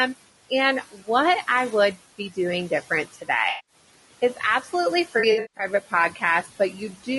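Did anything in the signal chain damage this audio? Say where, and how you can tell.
Yes. At the call-processing stage, noise suppressor artifacts run throughout. The room noise, sitting about 17 dB below the speech, is pulled down by about 17 dB between phrases and swells back under them.

At the codec stage, the speech sounds rough and grainy, with noise filling the gaps between harmonics and a dulled, synthetic-sounding top end. This is most likely low-delay AAC compression (AAC-ELD) at a low rate, around 32 kbps. Its short frames smear pitch detail, which sets it apart from ordinary band-limiting.

Speech cut by the noise suppressor also comes from call processing. It hits at 0.92–1.08 s, just before "I would", with a drop of about 15 dB. It recurs at 4.62–4.71 s, 6.11–6.23 s and 6.43–6.80 s, each about 10–11 dB. Parts of the speech are turned down with the background and sound swallowed or faint.

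AAC frame loss with concealment happens between the network and the decoder. The first loss covers 180 ms at 3.49–3.75 s. The second covers 260 ms scattered across 5.19–5.65 s, with the longest run about 150 ms. In both, the decoder fills in audio from the last good spectrum, unlike the suppressor's dips.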